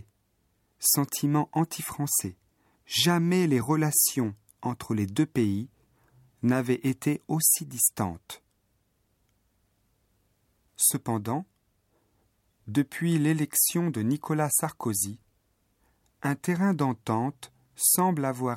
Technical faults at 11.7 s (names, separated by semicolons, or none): none